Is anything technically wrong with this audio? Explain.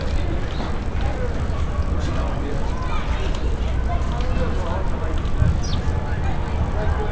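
Yes. Throughout the clip, the resampler restarted on every block. Each 20 ms block was converted separately, which fits a 24 kHz to 16 kHz conversion, so every block edge carries a small error. The result is a 50 Hz buzz present only with signal, visible as evenly spaced vertical lines on a spectrogram and tiny waveform discontinuities every 20 ms.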